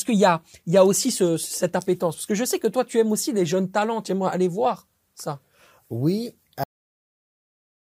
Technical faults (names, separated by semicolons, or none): cut-off end